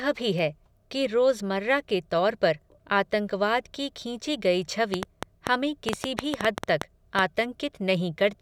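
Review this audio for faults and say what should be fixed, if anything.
Train of clicks, 4.94 to 7.20 s: roughly fifteen irregular pulses, about 6.2 per second and some 20 dB above the speech, likely from interference or a faltering interface. Keep the recording chain away from noisy equipment and use a stable, properly shielded interface and cabling.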